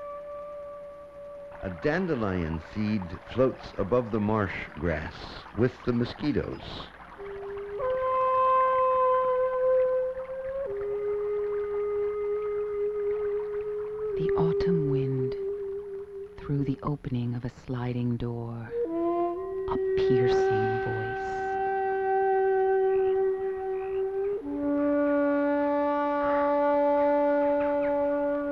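No faults found in this audio; nothing to flag.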